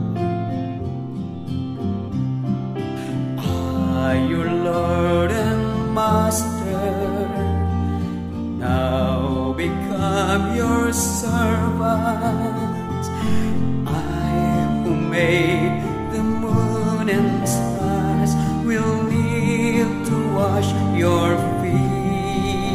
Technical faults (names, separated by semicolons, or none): none